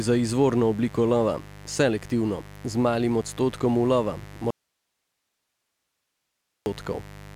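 A speech clip. A steady, raspy mains buzz runs throughout, built on 50 Hz harmonics from sharp switching spikes, sitting roughly 20 dB below the speech. After "z malim odstotkom ulova", the speech cuts out abruptly at 4.51 s and returns at 6.66 s, a gap of about 2.16 s. Only faint hiss remains, far below the speech. This is an audio dropout to a faint residue, likely a lost input while the later path stayed live.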